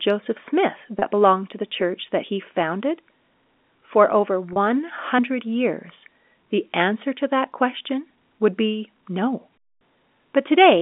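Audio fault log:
0.99–1.02 s and 4.53–4.56 s, packet loss with pitch repetition: about 30 ms of audio drops out each time, just before "belong to the church" at the first point. Each gap is consistent with a single lost packet. The receiver repeats the last pitch period to fill it, so each gap is heard as a brief held, buzzy tone rather than silence. It is carried on the 200 Hz–3.6 kHz telephone band of the G.711 A-law line.
5.19 s, audio missing between chunks: an abrupt skip just before "years the answer to", with roughly a twentieth of a second removed and the two sides butted together with no silence. The likely cause is a recorder or processor working in 3 s chunks that loses a short stretch at the handover.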